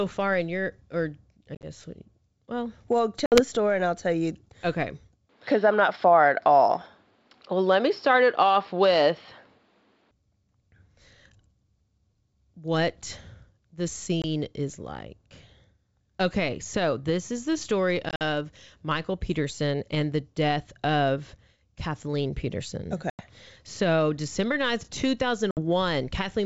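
Speech coded as a G.722 wideband call, which carries the voice clearly to about 7 kHz. It suffers from packet loss on an ADPCM call at 1.55 to 1.66, 3.26 to 3.41, 14.22 to 14.25, 18.09 to 18.22, 23.10 to 23.22 and 25.51 to 25.59 s. Each is a hard-edged hole of silence. The losses total 60, 60, 20, 80, 90 and 60 ms. The first and fourth are broken into scattered gaps, the longest 40 and 50 ms. After each hole, the decoder's predictor and step size no longer match the sender's. So the speech comes back slightly distorted, then settles within tens of milliseconds. From 5.29 to 10.11 s the sound turns dull and narrow. Nothing is heard above 5.5 kHz. The level shifts by a few decibels, and a faint new noise floor appears well below the speech. The change is instant, with no silent gap. This points to an input switched to a poorer device, likely a headset or second microphone passing a narrower band.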